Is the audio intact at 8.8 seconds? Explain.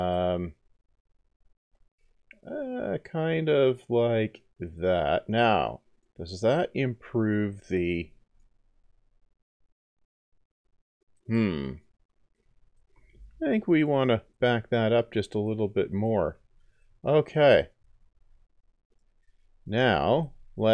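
Yes, the audio is intact at 8.8 seconds, with no dropout, click, distortion or other fault audible at that point.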